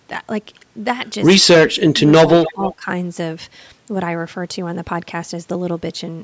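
A short speech recording through a call's microphone processing, with nothing above 8 kHz. Between 1.67 and 2.28 s and again from 2.52 to 2.87 s, the voice dips and drops out in pieces, down by roughly 30 dB and then 20 dB. That's likely speech suppressed in double talk, with the canceller turning the talker down along with the loudspeaker echo. From 2.43 to 2.75 s, a copy of a voice comes back about 285 ms late and around 15 dB under the speech, likely an echo leak where the canceller didn't remove everything its microphone picked up.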